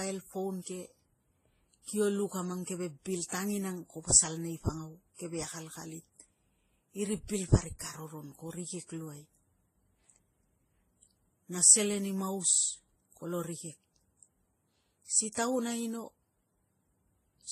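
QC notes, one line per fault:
Throughout: transcoding between lossy codecs. Nothing is heard above 14.2 kHz, and the speech carries several layers of coding damage at once, with the different artefacts heard together. The likely cause is a chain of low-bitrate encodes, which the sound suggests ran from MP3 to AAC-LC and then to Vorbis at around 27 kbit/s. Each pass spent its bits re-coding the earlier artefacts while adding its own, and the narrowest band limit in the chain remained.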